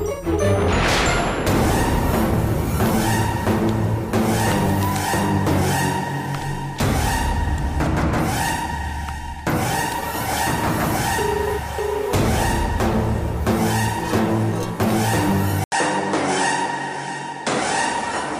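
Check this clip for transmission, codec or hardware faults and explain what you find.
One fault is audible, near the end. From 15.64 s the input appears switched to a poorer device, likely a different microphone. An 80 ms silence marks the switch. After it, nothing above about 10.1 kHz remains, so the top sounds duller. A faint new noise floor appears, while the level stays about the same.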